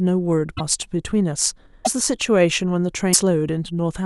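Speech clip with three brief glitches where the audio skips ahead, at 0.56–0.61 s, 1.84–1.88 s and 3.12–3.17 s, each one or two 26.1 ms frames long. Likely a broken MP3 bit reservoir: after lost frames, the decoder borrows bytes that belong to other frames.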